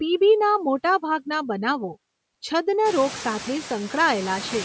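Speech with noise suppressor artifacts running through the whole clip, band-limited by the call's microphone processing so nothing reaches above 8 kHz. The suppressor pulls the steady background down by about 22 dB in the gaps, then lets it swell back under each phrase. Around 3 s the room noise climbs by roughly 20 dB, to about 15 dB below the speech. Unlike a noise gate, which slams the noise fully off and on at a threshold, this dips and recovers smoothly, band by band.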